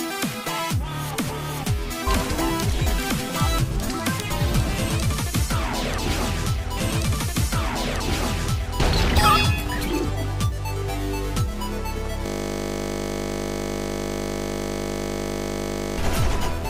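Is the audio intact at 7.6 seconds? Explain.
No, 7.6 seconds falls inside a stream segment repeated fault running from about 6.76 to 8.78 s. The player queued the same chunk twice, so roughly 2.02 s of audio plays over again, with a small blip where it jumps back.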